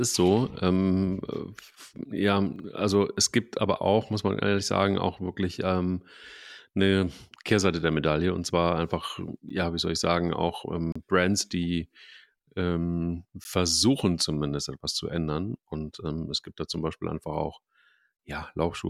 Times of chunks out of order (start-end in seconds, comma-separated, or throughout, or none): 2.56-2.64